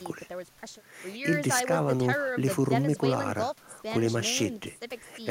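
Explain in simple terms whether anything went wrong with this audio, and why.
Nothing went wrong with this audio that a listener would notice.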